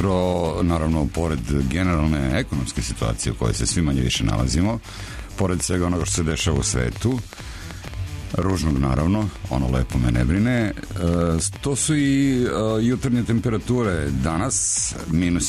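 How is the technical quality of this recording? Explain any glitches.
The recording is marred by one glitch. From 4.58 to 11.57 s, a train of clicks ticks over the sound, around six per second at an uneven pace, some forty similar pops standing out above the audio. Likely cause: electrical interference or a faulty connection or power supply injecting repeated pulses.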